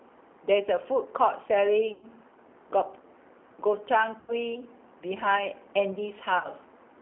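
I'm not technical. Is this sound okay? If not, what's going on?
No. The speech has gone through the G.729 codec, a phone-call compression. It sounds thin, slightly rough and a bit artificial throughout.

There is also VoIP packet loss concealed by the speech codec at 1.94–2.07 s, 4.20–4.36 s and 6.38–6.48 s. Bits of the call went missing. The decoder guessed to fill them, so the sound turns buzzy or noisy and fades briefly.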